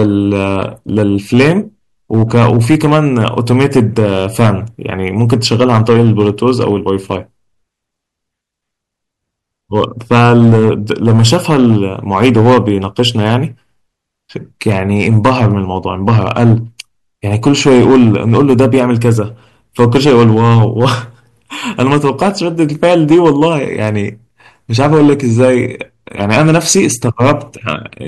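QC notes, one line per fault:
Throughout: hard clipping. The speech is driven about 10 dB past what the stage can pass, so the loudest peaks are sliced flat. About 3 percent of samples went over the stage's limit. Those flat tops add high harmonics, heard as harsh fuzz on loud syllables.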